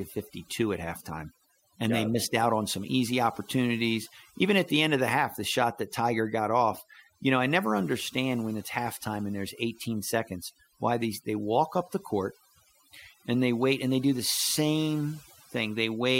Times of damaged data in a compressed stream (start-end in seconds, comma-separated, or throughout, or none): none